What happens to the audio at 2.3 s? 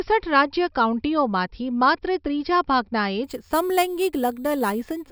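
Nothing happens to the audio at 2.3 s: the speech carries straight through that moment with no dropout, click, distortion or other fault.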